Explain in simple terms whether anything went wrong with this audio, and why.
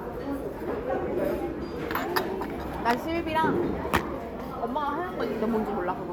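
Nothing went wrong: no audible fault anywhere in the recording.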